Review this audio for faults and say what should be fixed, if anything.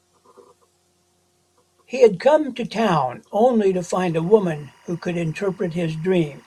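Timecode bleed, 3.74 s to the end: timecode leaking from an adjacent track or cable adds a faint chirping warble near 1 and 2 kHz. Keep timecode on separate, shielded cabling, well away from audio tracks.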